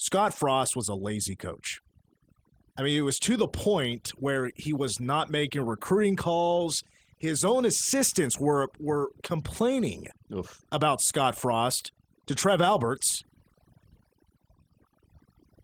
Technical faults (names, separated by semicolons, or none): overdone noise removal